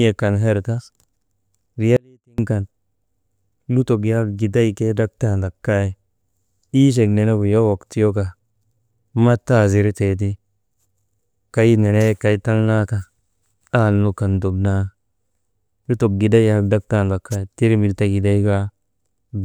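An audio dropout to a faint residue runs from 1.97 to 2.38 s: the speech cuts abruptly for 0.42 s, leaving only faint leakage roughly 35 dB down, likely from a brief upstream signal loss.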